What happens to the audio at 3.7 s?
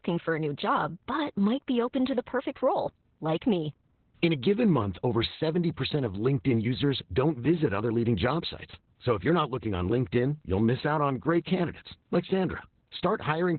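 At 3.7 s you're hearing Opus voice compression, present across the whole clip. Nothing survives above about 4.2 kHz, and the coarsely coded excitation makes the speech sound muffled, hoarse and a bit robotic, which fits a narrowband SILK stream at around 8 kbps.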